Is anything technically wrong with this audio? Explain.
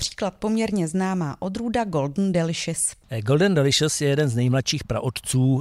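No, nothing technically wrong stood out on listening to this speech recording.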